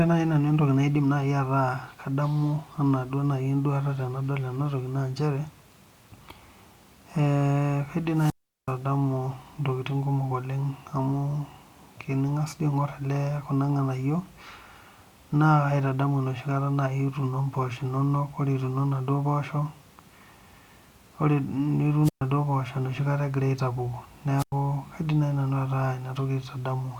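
At 8.13 s, 22.03 s and 24.38 s the speech suffers a wireless microphone squelch dropout. The radio link fades, hiss rises, and the receiver's squelch mutes the output for about 378 ms, 128 ms and 97 ms respectively before the signal recovers.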